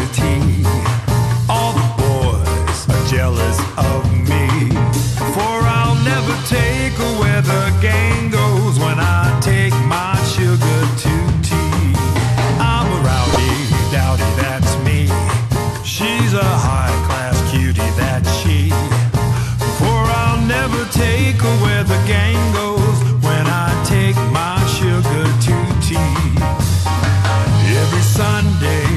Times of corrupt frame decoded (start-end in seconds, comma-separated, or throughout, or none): 13.33-13.38